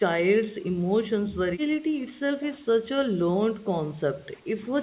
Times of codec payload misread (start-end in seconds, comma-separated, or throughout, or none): none